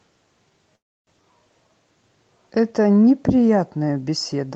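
At 0.75 s the speech stalls until 1.23 s in a call audio freeze, likely from delayed packets draining the jitter buffer. The last sound is stretched into a fading buzz or hiss, then about 0.3 s of silence. Unlike a dropout, the speech then resumes exactly where it stopped, with nothing lost.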